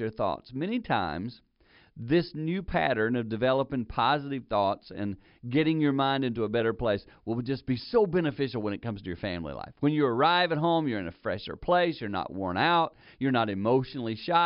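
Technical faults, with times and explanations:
No technical faults can be heard in the speech.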